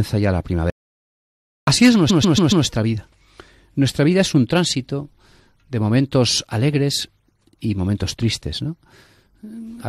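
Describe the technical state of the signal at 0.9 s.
At 0.9 s the signal is inside an audio dropout to silence running from 0.70 s to 1.67 s, just after "ya la". For roughly 0.97 s the speech cuts out mid-flow and the level falls to silence, with no room tone or noise floor underneath, before sound resumes abruptly. The likely cause is a brief loss of the input, such as a disconnected device, failed link or stray mute, while the recorder kept writing silence. Whatever was spoken in that gap is gone.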